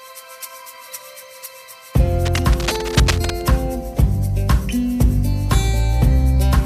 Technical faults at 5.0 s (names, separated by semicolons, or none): none